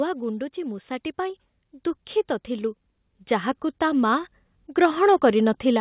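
Automatic gain rising runs from 2.45 s to 5.25 s. The gain control judged the incoming speech too quiet and kept turning itself up over nearly three seconds, lifting the level by about 7 dB. Because it is the gain stage acting, the voice and the room noise behind it swell together in a slow, steady climb. All of this sits inside a narrowband call sound with nothing above 4 kHz, which fits G.711 mu-law coding.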